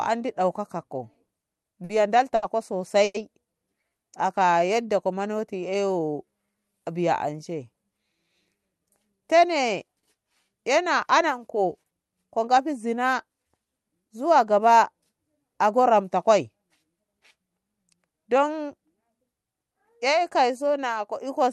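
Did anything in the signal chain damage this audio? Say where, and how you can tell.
Yes. The damage comes from the network and jitter buffer stage. Repeated stalls (stutter) run from 1.13 to 1.91 s: five gaps, 120 ms of filled audio in total, the longest 50 ms, about 15% of that span. On the waveform, short stretches repeat. On a spectrogram, harmonics freeze briefly again and again.

A short stall from a late packet occurs at 2.35–2.44 s. One sound is held for 70 ms while the receiver waits, then playback resumes from the same point, 70 ms later. The spectrogram shows a flat horizontal streak of unchanging harmonics.

A call audio freeze appears at 3.04–3.16 s. About 100 ms of sound is a fading continuation of the last sound, ending in roughly 10 ms of silence. The cause is likely packets held up in transit, which drained the buffer. The waveform tapers to a flat line.

A jitter buffer slow-down spans 3.83–6.85 s. 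The receiver added 322 ms by repeating pitch periods, so the audio plays at 90% speed with unchanged pitch. The spectrogram shows stretched formant tracks with evenly spaced harmonic ridges.

A jitter buffer speed-up covers 8.58–12.46 s, running at 109% speed with about 0.4 s removed in small pitch-period cuts. Pitch stays the same, but the audio sounds hurried. The waveform shows compressed segments, and the spectrogram is horizontally squeezed, below the call codec's upper edge near 12 kHz.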